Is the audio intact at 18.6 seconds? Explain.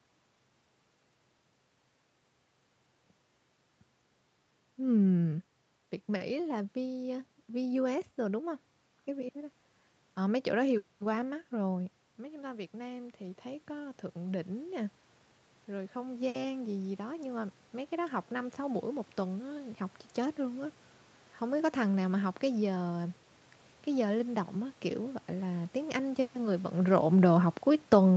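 No. At 18.6 s the speech and the room noise behind it are still swelling together, part of an automatic gain rising from 12.15 to 20.78 s. The input had dropped by about 9 dB, so the gain control gradually raised its gain by about 10 dB.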